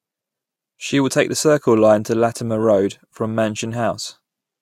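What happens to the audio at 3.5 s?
Nothing goes wrong at 3.5 s; the speech there plays through intact, with no dropout, click, distortion or other fault at that point.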